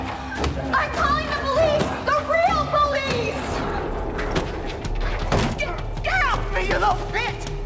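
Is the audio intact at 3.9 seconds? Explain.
Yes, the audio is intact at 3.9 seconds, carrying only the ordinary band limit of a G.722 call path, with nothing above 8 kHz.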